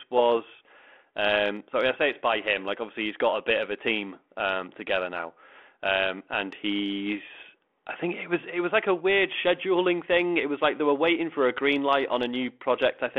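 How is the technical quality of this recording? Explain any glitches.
No glitches can be heard anywhere in the recording.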